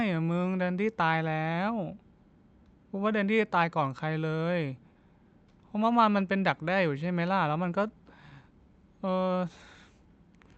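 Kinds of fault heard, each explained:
No faults can be heard in this recording.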